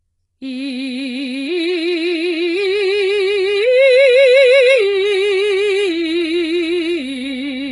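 From the start of the music, the treble is being rebuilt rather than carried, likely by HE-AAC compression working at a very low rate, around 12 kbps. The encoder spends its few bits on the lower spectrum and fills the top by copying lower bands upward under a rough envelope. The damage is heavy: nothing real survives above 11 kHz, and the synthesized upper band sounds grainy and metallic, with bright edges that don't match the pitches beneath them.

From 2.57 s to the end, a video or display buzz joins the music. A screen or its video cable is leaking into the audio path, putting a 50 Hz buzz tied to the picture's field rate into the signal along with fizzy hash above it and a thin line-rate whine at 15.6 kHz. It sits well under the music, roughly 35 dB down, and stays behind it to the end.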